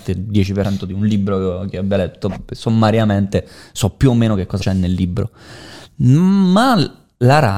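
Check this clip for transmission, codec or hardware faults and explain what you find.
Two spots of compressed frames skipped in this speech, at 0.65 s and 4.61 to 4.63 s. Whole coded frames never got decoded, so the audio jumps ahead, roughly 150 ms first, then about 100 ms, which points to about 10 frames, then about 4.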